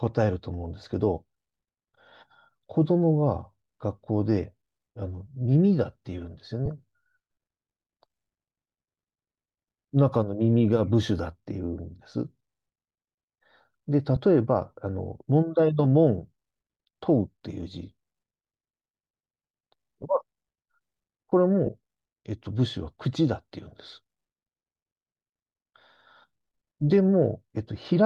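Brief hissy smears interrupt the speech at 6.66, 14.16, 20.02 and 21.66 s, each 15 ms except the 7.5 ms one at 14.16 s. These are lost LE Audio frames: the LC3 decoder filled each gap with the previous spectrum, signs randomised, consistent with one or two 7.5 ms frames.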